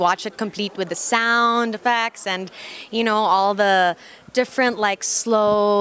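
No technical fault can be heard anywhere in the audio. There is nothing to time or trace to a cause.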